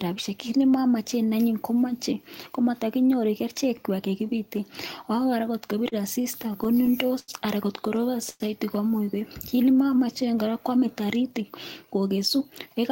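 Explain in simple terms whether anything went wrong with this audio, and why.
From 5.67 to 7.30 s the speech stutters and drags through a dozen tiny hitches, up to 88 ms each. These are repeated stalls (stutter): packets kept arriving late, so the receiver stretched the last sound while waiting.

At 8.29 s the sound hangs as a brief buzz or hiss for about a tenth of a second, then resumes. This call audio freeze likely came from delayed packets, which inserted a 108 ms gap.

From 9.56 to 10.26 s the voice slows to about 92% speed at unchanged pitch. This is a jitter buffer slow-down, which adds 67 ms to rebuild its reserve.

From 12.15 to 12.90 s the speech sounds slightly hurried, at about 108% speed. This is a jitter buffer speed-up, which cuts roughly 70 ms to reduce built-up delay.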